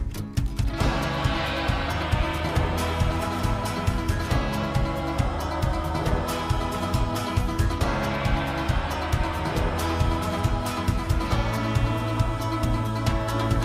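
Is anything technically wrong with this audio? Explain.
No, nothing technically wrong turns up here; the audio sounds fine all the way along.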